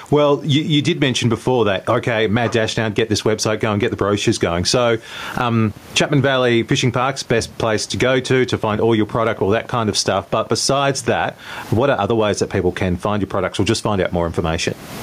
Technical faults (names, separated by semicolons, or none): gain pumping; train of clicks